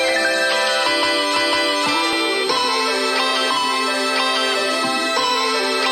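A high, thin whistle sits under the sound for the whole clip, wandering between about 4.0 and 4.6 kHz and only roughly 10 dB below the material. It is switching supply whistle: a power supply running in audible burst mode or beating with another one, its pitch shifting as the load changes.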